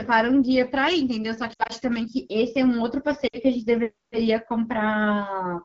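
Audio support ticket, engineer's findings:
AMR wideband (HD Voice) codec, whole clip: speech comes through rough and raspy, clearly damaged. Sounds like AMR-WB running at one of its two lowest modes, something like 8.85 kbit/s, with too few bits for the pulse-driven vocal tract model to hold up.

Lost AMR speech frames, two spots. 1.53 to 1.72 s: broken, warbly patch spread over about 160 ms, worst gap around 60 ms. 3.27 to 3.37 s: three frames lost, about 60 ms in all. Decoder is concealing with the last good pitch and tract settings at falling gain, fading out quickly, then recovering weak.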